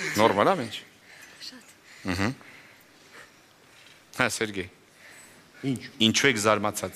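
Nothing in the sound stood out as a technical problem on listening.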